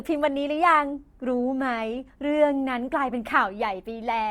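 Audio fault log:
Throughout: Opus compression, likely, with plainly audible damage. The speech keeps its full band, with content reaching up to about 20.2 kHz, so nothing sounds muffled or narrowed. Instead, voiced tones turn grainy, rough and noisy, which points to the music (CELT) mode at a low rate near 24 kbps filling starved bands with folded or noise energy. That graininess, with less swirling and fewer watery holes, separates it from MP3 damage.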